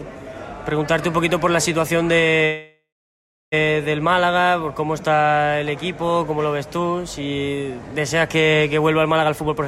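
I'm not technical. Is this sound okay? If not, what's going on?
No. From 2.45 to 3.54 s the sound stops and is replaced by a fading buzz that falls silent for about 0.64 s, then resumes where it left off. This is a call audio freeze, likely from delayed network packets. Nothing is lost, but everything after arrives about a second late.

From 9.21 to 9.63 s the sound runs at about 122% speed at unchanged pitch, so it seems hurried. This is a jitter buffer speed-up: the receiver trimmed about a tenth of a second in many tiny slices to catch up on the built-up delay.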